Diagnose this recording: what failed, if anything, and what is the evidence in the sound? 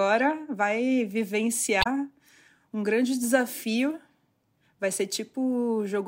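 The failure is in the codec stage: damaged data in a compressed stream. From 1.79 to 1.87 s, the decoder meets corrupted frames, misreads or rejects them, and loses sync until it finds a valid frame header. The result is a brief disruption of about 80 ms in the speech.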